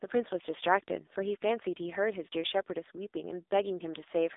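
Throughout the speech, the AMR narrowband mobile codec is heard. The line is confined to 300 Hz to 3.7 kHz, with nothing above 3.8 kHz. Its sparse-pulse vocal-tract model leaves heavy, buzzy, synthetic colouring, which fits the low 6.7 kbps mode.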